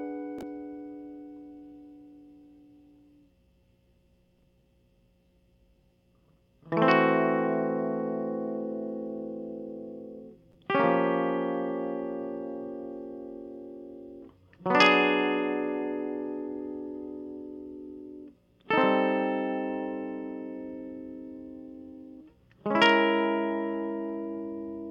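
Nothing technical goes wrong anywhere in this music, so there's no fault to point to at any moment.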